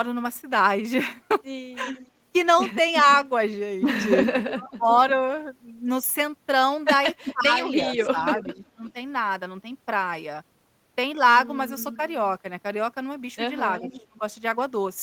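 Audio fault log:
1.85–3.03 s, 4.19–5.0 s, 7.24–8.91 s, 11.79–11.95 s, 13.79–14.06 s, echo leak: a delayed copy of the speech returns about 360 ms behind the original. It sits roughly 10 dB below the direct speech in the first and third spans, only about 5 dB below at 4.19 s, and about 20 dB down as faint traces in the last two. The likely cause is a loudspeaker on the far end whose echo canceller let part of the microphone pickup through.
4.32–4.87 s, 7.32–8.95 s, 13.81–14.22 s, speech suppressed in double talk: the talker's level dips in pieces while the echo is present, down by about 20 dB in the first two spans and about 30 dB at 13.81 s. About 0.4 s, 0.7 s and 0.3 s of those spans are affected. This is likely the echo canceller failing to separate the near talker from the returning echo and attenuating both.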